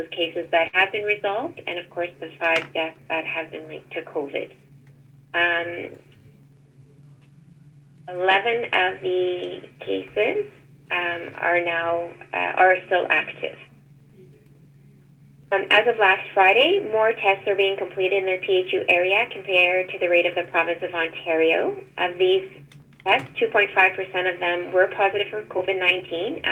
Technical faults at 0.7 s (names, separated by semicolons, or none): burst of packet loss